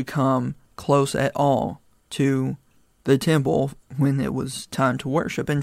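No technical faults can be heard at any point in this speech recording. There are no events to place in time order, so there are no times to give.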